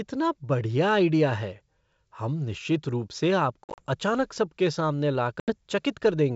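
At 3.64–3.82 s, after "हम निश्चित रूप से", and at 5.40–5.55 s, after "अचानक सबके सामने", packet loss on an ADPCM call cuts hard-edged silent holes into the speech. The first event is broken up, with 110 ms missing across 140 ms and no single gap longer than 50 ms. The second loses 80 ms. Unlike a plain dropout, each hole is followed by brief, slight distortion, which settles within tens of milliseconds as the decoder's predictor and step size catch up with the sender's. Around it is the clear 64 kbit/s G.722 wideband coding.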